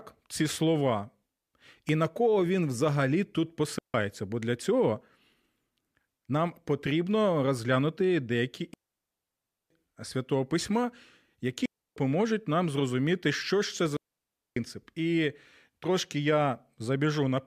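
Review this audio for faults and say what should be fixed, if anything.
Digital wireless dropouts cut the speech to near silence at 3.79 s after "кого він взагалі тут" (0.16 s), 8.74 to 9.70 s after "нам потрібно розглянути деякі" (almost a full second), 11.66 to 11.96 s (0.31 s), and 13.97 to 14.57 s after "зрозуміти що ж це" (0.6 s). Each time, the receiver lost too much of the data stream and muted with a very fast fade. Unlike an analogue wireless dropout, there is no hiss or noise burst around the gaps, only clean holes. To prevent this, keep the transmitter within clear line of sight of the receiver, reduce RF interference, and check antenna placement and battery level.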